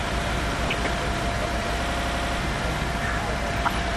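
Throughout the clip the sound is dull and plainly gurgling, with a granular roughness and upper frequencies that seem to flicker in and out. This is likely MP2 compression at a low bitrate, around 80 kbps. Layer II divides the audio into 32 sub-bands and shares out a limited bit budget among them. Here too few bits force the top bands off intermittently and leave the remaining ones coarsely quantised.

From 0.68 to 0.87 s, and again from 3.53 to 3.80 s, a burbling disturbance sits on top of the sound. This is DAB burbling, and the later burst is longer and somewhat denser. Weak reception let a small fraction of a percent of bit errors slip past error correction into the MP2 stream. Corrupted samples then put short blips of noise into single sub-bands, with 8 frames hit in the first burst and 12 in the second.

Between 1.88 and 2.39 s the sound turns into a rapid mechanical stutter, a chattering repetition at about 11.7 Hz. 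This is a system hang loop. The computer or driver stalled while the audio hardware kept replaying the same ring buffer. One 85 ms slice, which fits a 4096-sample buffer, repeats six times, and about half a second of real audio is lost in its place.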